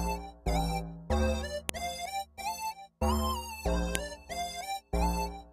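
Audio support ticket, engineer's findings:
Sharp clicks at 1.69 s and 3.95 s: file header played as audio. Concatenation or streaming step passed WAV header bytes through as samples at each segment join.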